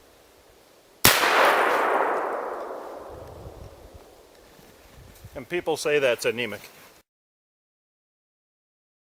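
No technical faults can be heard anywhere in the clip.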